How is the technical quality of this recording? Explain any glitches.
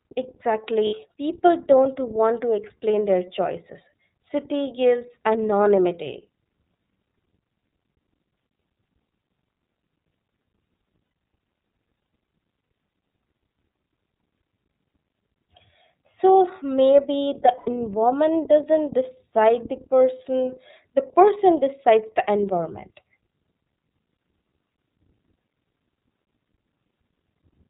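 Technical quality is limited: the whole clip runs through the iLBC codec, and four short dropouts interrupt the speech.

The iLBC codec damage is plainly audible throughout. It codes each frame's excitation independently, which leaves the speech clear but rough and slightly synthetic. The coarse timing points to the 30 ms frame mode at roughly 13 kbps. On a spectrogram, all energy stops sharply at 4 kHz, with a blank band above. Harmonics look smeared and grainy.

Lost iLBC frames occur at 0.87–0.93 s (60 ms), 11.03–11.15 s (120 ms), 12.62–12.68 s (60 ms) and 17.57–17.69 s (90 ms). When packets vanish, the decoder repeats the last pitch cycle mixed with noise, fading over longer gaps. Each gap sounds like a held, buzzy or breathy vowel, and normal speech returns immediately afterward. A spectrogram shows frozen, evenly spaced harmonic stripes. The waveform shows a repeating periodic pattern that decays, clearest at 11.03 s.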